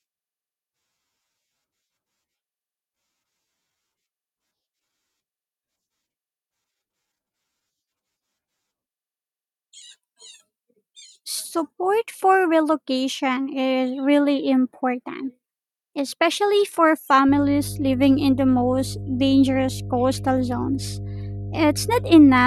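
A steady low drone at 50 Hz, with a few low harmonics, enters at 17.28 s, right after "especially for", and continues to the end, sitting about 10 dB below the speech. This is mains hum: a ground loop or nearby transformer coupling the power line into the signal.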